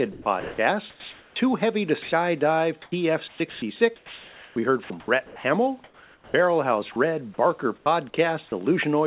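From 0.12 to 1.36 s the speech is chopped by the voice detector. About 780 ms is replaced by comfort noise, likely because the detector kept switching off. From 2.02 to 2.12 s, sound is dropped by the voice detector. About 100 ms of hiss likely stands in for sound the detector took for background. From 2.82 to 6.34 s the chopping returns. About 1.8 s flickers into synthetic noise, likely from the same switching. From 6.92 to 6.96 s there is a brief drop, likely the detector again. From 7.78 to 8.52 s there is more chopping, with about 160 ms filled by noise, likely from repeated switching. Throughout, nothing is heard above 4 kHz, as expected on a narrowband call line.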